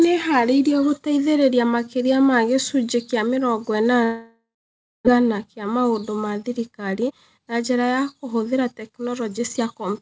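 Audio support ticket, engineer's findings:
Long network dropout, 4.04–5.09 s, after "ma gĩcunjĩ kĩa mĩrongo", resumes at "kĩa maũndũ ma". Concealment buzz fades, then 0.58 s of silence. About 0.6 s of speech lost. Waveform: decaying tail, then flat line. Spectrogram: smeared harmonics, then blank. Likely packet loss upstream.

Jitter buffer speed-up, 6.72–9.86 s, starting right after "kĩa maũndũ ma". Speech runs about 9% fast at unchanged pitch and sounds hurried. The buffer drains its backlog by cutting short pitch-period chunks, roughly 0.3 s in total. Spectrogram: harmonic spacing unchanged, syllables compressed in time, G.722 band ending at 8 kHz.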